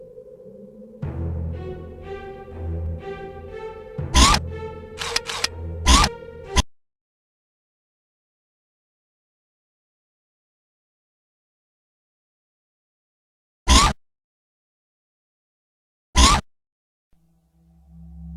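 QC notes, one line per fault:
5.95–5.97 s, damaged data in a compressed stream: a brief glitch lasting about 22 ms. Part of the compressed data at this point was corrupted, so the decoder misread or discarded the affected frames, lost sync and searched for the next valid frame header. The garbled output before resynchronising makes the blip.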